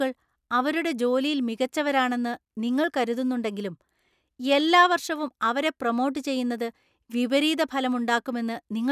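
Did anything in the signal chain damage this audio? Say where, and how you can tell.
No, nothing in the signal chain stood out as damaging this audio on listening.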